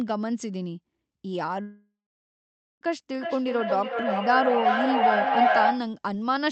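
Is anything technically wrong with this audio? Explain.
Yes, there are two faults.

Long network dropout, 1.61 to 2.83 s: the audio likely stopped arriving for about 1.2 s. The receiver stretches the last sound into a fading buzz, which gives way to roughly 0.87 s of silence before the speech resumes with that stretch missing.

Feedback howl, 3.14 to 6.00 s: two devices in the same room are feeding the microphone-to-loudspeaker loop, with gain above unity on each pass. The repeats build into a tone near 700 Hz, pulsing roughly every 400 ms and peaking about 4 dB above the speech.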